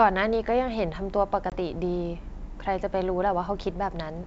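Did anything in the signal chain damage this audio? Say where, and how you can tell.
Yes. At the network stage there is packet loss on an ADPCM call at 1.50 to 1.55 s: a hard-edged 20 ms hole, about one packet in the G.722 stream. The sound then resumes slightly distorted before settling, because the decoder's predictor and step size fell out of step with the sender's. A plain PCM dropout would resume cleanly.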